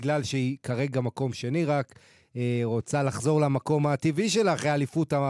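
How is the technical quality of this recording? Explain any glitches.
Nothing stood out on listening, and there are no glitches to explain in this recording.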